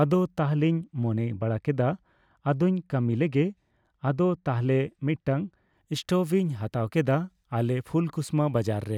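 A de-emphasis filter was applied wrongly to this speech clip from 0.39 to 5.75 s, putting a treble cut on audio that had no matching boost. The response slopes steadily downward, about 10 dB lower at 10 kHz than at 1 kHz, leaving that stretch dull and muffled.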